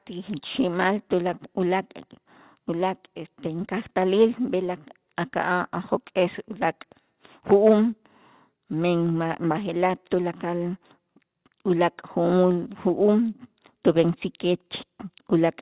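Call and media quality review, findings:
Nothing stood out on listening to the speech over the G.711 call path, whose content stops at about 4 kHz as that codec's narrowband coding would give.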